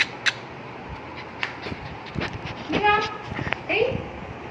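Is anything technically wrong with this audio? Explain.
No, nothing technically wrong here.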